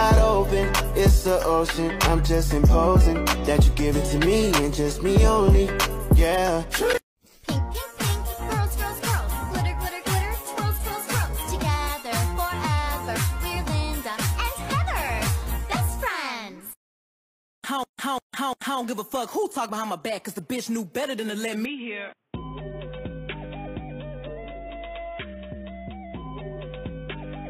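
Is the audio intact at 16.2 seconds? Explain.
Yes, the audio at 16.2 seconds is intact, with no dropout, click, distortion or other fault at that moment.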